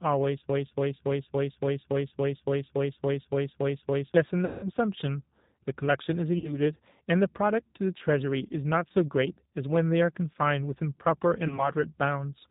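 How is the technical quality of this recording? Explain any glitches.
The recording is poor: a plainly audible low-bitrate codec runs throughout, and it is interrupted by a long repeating loop and three short dropouts.

G.729 codec, whole clip: the speech is band-limited below 4 kHz and sounds rough and synthetic, which fits 8 kbit/s frame-based coding. This is a steady texture, not momentary glitches.

Broken-record loop, 0.49 to 4.14 s: one 0.28 s fragment repeats exactly about 13 times, most likely because the stream stalled and resent its last buffer. Unlike concealment, the repeats stay identical and never fade.

VoIP packet loss concealed by the speech codec, at 4.45 to 4.72 s, 6.38 to 6.58 s and 11.47 to 11.69 s: the decoder stretches the last sound into a buzzy tone or coloured noise that fades, for about 180 ms, 60 ms and 30 ms of missing audio. The first gap fits several lost packets. 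The speech stays weak briefly after each one.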